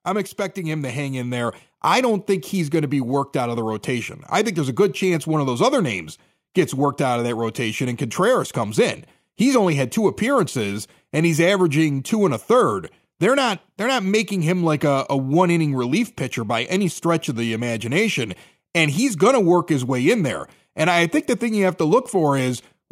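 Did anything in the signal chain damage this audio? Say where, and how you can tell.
Yes: automatic gain rising from 0.59 to 4.86 s in call processing. The AGC judged the input too quiet, lifting speech and background together by about 6 dB.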